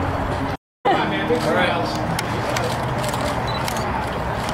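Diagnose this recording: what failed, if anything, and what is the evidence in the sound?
A playback stall from 0.55 to 0.86 s: the sound cuts out mid-flow and the output goes silent for about 0.29 s before continuing. The likely cause is the player's buffer running dry, or its output thread being blocked, until playback recovered.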